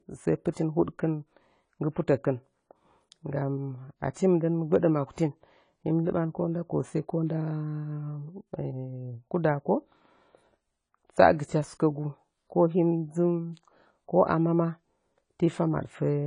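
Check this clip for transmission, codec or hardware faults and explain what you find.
Two codec faults are present. Both come from lossy transform coding.

AAC compression runs through the whole clip. The speech sounds dull and smeared. Nothing reaches above 10 kHz, so the top of the spectrum is simply missing. The damage is plainly audible. The likely cause is AAC-LC coding at a low rate, which fits a bitrate of around 24 kbps. With so few bits, the encoder lowers its cut-off and quantises the remaining bands coarsely against a hearing model. Fine detail in sibilants and sustained sounds is lost.

Pre-echo occurs from 0.51 to 0.57 s. A hiss spreads about 56 ms ahead of a sharp attack, and the onset itself sounds softened. The codec shares its quantisation noise across the whole transform block. When the attack lands late in that block, noise scaled for the loud part fills the quiet moment before it. 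The noise arrives early, before the attack it belongs to.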